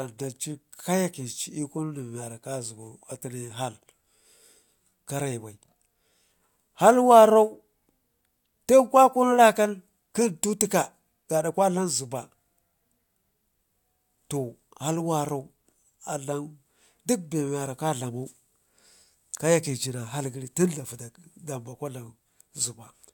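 Listening to the speech recording, nothing stood out as a technical problem at any point.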